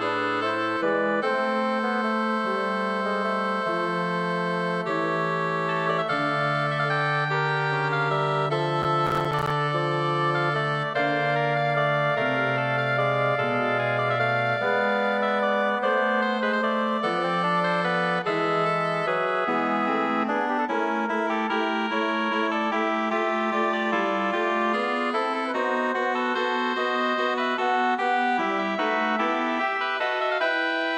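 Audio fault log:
8.82–9.50 s processor overload crackle: repeated missed deadlines leave about twenty tiny silent gaps of around 5 ms, heard as gritty tearing rather than one clean dropout.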